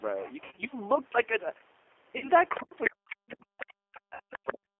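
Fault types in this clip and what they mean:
G.729 codec, throughout: the speech is carried at 8 kbit/s in a 300 Hz to 3.4 kHz band, rebuilt from a vocal tract filter, pitch predictor and sparse pulses, so it sounds plainly rough, slightly synthetic and muffled, with nothing bright above 3.4 kHz.
VoIP packet loss concealed by the speech codec, 0.44 to 0.64 s, 2.18 to 2.29 s and 4.14 to 4.20 s: the decoder fills missing 10 ms frames by stretching its last pitch and filter, giving buzzy, fading tones. The first gap is 120 ms scattered over 180 ms, the others 40 and 60 ms.
Other side's voice leaking through, at 2.55, 2.84, 3.29, 3.60 and 4.33 to 4.53 s: brief scraps of a second voice appear, likely loudspeaker sound that the echo canceller left in the microphone. They range from faint, about 25 dB down, to roughly as loud as the talker.
Speech suppressed in double talk, 2.90 to 4.79 s: while the other side's sound overlaps, the talker's voice dips and breaks up, falling by as much as about 40 dB at its deepest, likely because the echo canceller turned everything down when both sides were active.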